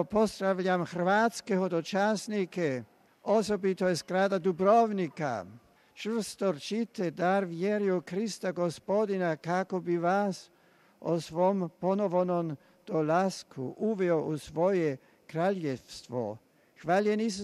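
No technical faults are audible.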